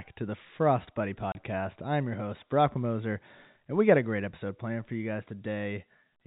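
A speech clip carried over G.711 A-law telephone coding, which confines it to the band below 4 kHz, has one dropout from packet loss filled with silence at 1.32 to 1.35 s, just before "I'm your host". The 30 ms gap fits a single lost packet that the receiver replaced with zeros. On the waveform it appears as a flat line with abrupt edges, and on the spectrogram as a clean vertical blank strip.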